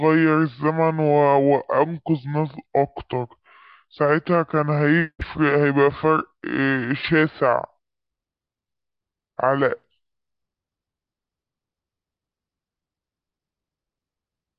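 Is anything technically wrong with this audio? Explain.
Yes. Throughout the speech runs at about two-thirds speed and roughly 7 semitones low, a wrong sample rate, which fits 48 kHz audio played at 32 kHz. Unlike a plain pitch shift or time-stretch, pitch and tempo drop together.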